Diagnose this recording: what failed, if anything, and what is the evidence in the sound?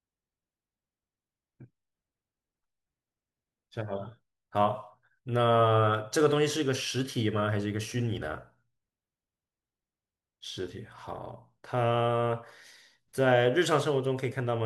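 No fault found in this recording.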